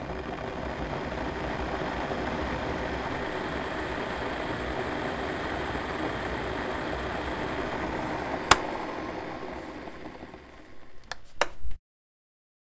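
Nothing in this recording of everyday sounds stood out as a technical problem on listening.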